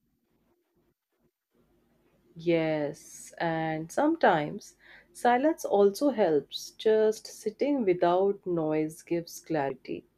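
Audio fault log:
9.67–9.70 s, damaged data in a compressed stream: near the end of the speech a brief glitch cuts through, lasting about 30 ms. A short stretch of the encoded stream is corrupt, so the decoder misreads those frames, loses its place, and jumps ahead to the next valid frame header. The garbled frame output makes the glitch.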